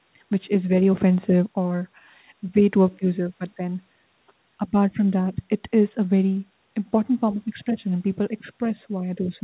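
There are no technical faults to describe at any point in this speech, which carries the narrow, telephone-like bandwidth of a call path topping out around 4 kHz.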